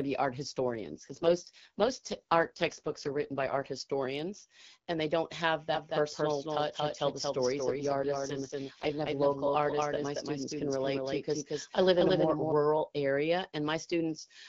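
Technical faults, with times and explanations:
0.60–3.66 s and 7.69–9.08 s, AMR rate drop: after "to be art" the speech turns rough and synthetic until "historians and they don't", and again later. The AMR-WB codec falls from its light 12.65 kbit/s to 6.6 kbit/s, trading speech detail for error protection. The audio band and continuity stay intact, which separates this from a bandwidth switch or dropout.
5.74–12.52 s, doubled audio track: just after "and they don't have", a full-band copy of the speech trails about 200 ms behind at about 5 dB lower. Unlike an echo or reverb, it has no decay or room colour and starts and stops abruptly, most likely from a second, slower capture path mixed in.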